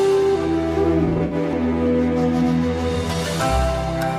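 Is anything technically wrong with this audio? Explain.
Yes. AAC frame loss with concealment occurs from about 1.05 to 1.34 s. Around 150 ms of audio went missing in several gaps spread over roughly 256 ms, which fits about seven lost frames. The longest gap runs about 70 ms. For each gap, the decoder rebuilt the sound from the last good spectrum, scrambling signs or interpolating energy. Because the gaps are brief, the result is a smeared, noisy, phasey stretch rather than a fade to silence.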